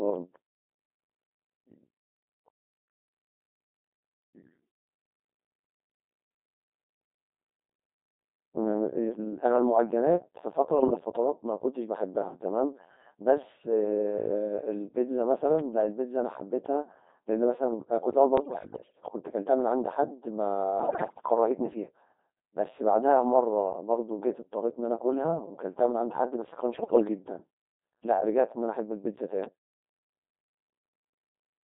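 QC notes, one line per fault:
Throughout: Codec 2 vocoder. The speech is rebuilt from pitch, voicing, level and a coarse spectral envelope rather than the original waveform, so it comes out robotic and buzzy, confined to 200 Hz to 3.7 kHz. The heavy smearing fits roughly 2.4 kbit/s.
10.78–10.99 s, 18.38–18.93 s, 20.80–21.26 s and 26.78–27.08 s: bit errors on digital voice radio. Corrupted bits, at a rate of a few percent, scramble the pitch, level and voicing parameters of whole frames, so the synthetic speech lurches in pitch and loudness and dissolves into warbling, bleeping gibberish.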